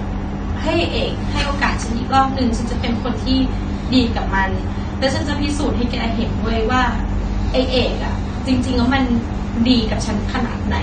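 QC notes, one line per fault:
Throughout, AAC compression: the speech has likely passed through a low-rate AAC-LC encoder, and the damage fits a bitrate of about 32 kbps. Starved of bits, the encoder quantises its frequency lines coarsely against its hearing model and discards the top of the spectrum, leaving nothing above 9 kHz. The result is plainly audible: dull, smeared speech with a warbling, unsteady texture on held sounds and a fizzy edge on sibilants.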